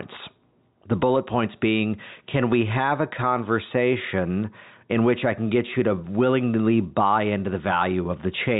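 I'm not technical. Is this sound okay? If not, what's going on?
Yes, nothing is wrong with this speech.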